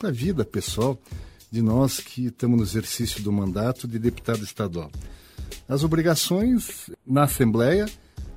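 From 6.42 to 7.42 s there's channel delay (comb filtering): one side lags by a tiny fraction of a millisecond, carving notches from around 5 kHz, so the top goes hollow.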